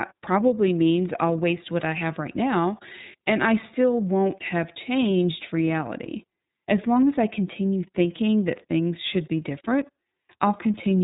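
Throughout, the speech sounds dull, rough and synthetic, cut off above 3.8 kHz: iLBC codec damage, coding each 30 ms frame independently, which fits its 13.33 kbps mode.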